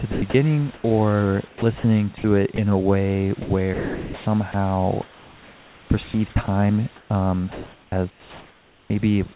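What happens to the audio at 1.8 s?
Between 1.48 and 2.58 s the speech is chopped by the voice detector, most likely because the sender's voice activity detection toggled repeatedly between transmitting and muting. About 280 ms of quiet syllables and word edges were dropped and filled with synthetic comfort noise, so the speech sounds choppy. Clean transmission resumes just before "a way".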